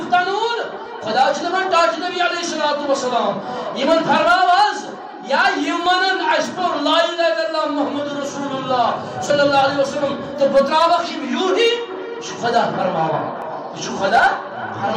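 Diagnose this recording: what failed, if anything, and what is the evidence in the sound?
Small skips forward with no silence at 0.86, 5.86, 9.3 and 13.42 s. Roughly 10 ms vanishes each time, about 30 ms at 9.3 s. The cause is likely a dropped buffer (overrun) in the driver: unread samples were overwritten and the surrounding audio joined directly.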